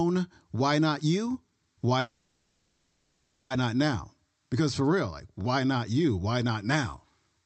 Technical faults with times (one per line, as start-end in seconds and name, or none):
1.99-3.52 call audio freeze